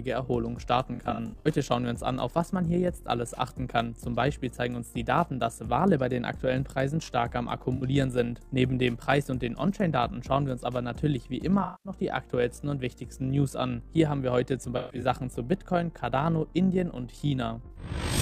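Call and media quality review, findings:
Overlap-add ripple, entire clip. Fast rough flutter, robotic tremolo, level pumping about 6 dB at around 50 Hz. Probable component: frame-based processing stage (resynthesis/enhancement). Mechanism: analysis/synthesis windows overlapping without constant-gain sum, so gain dips once per frame, which fits frames near 20 ms.

AAC frame loss with concealment, 0.94–1.47 s. Smeared, noisy, phasey patches scattered across roughly half a second, about 277 ms missing in total, longest gap around 70 ms. Probable component: AAC decoder concealment after transport loss.

AAC frame loss with concealment, 7.75–7.83 s, 11.63–11.92 s, 14.77–15.04 s, 17.71–17.76 s. Brief smeared, phasey fill-ins: 64 ms, 213 ms, 192 ms (longest run around 150 ms), 43 ms. Mechanism: decoder repeats last good spectrum with sign scrambling/energy interpolation, fading on longer runs.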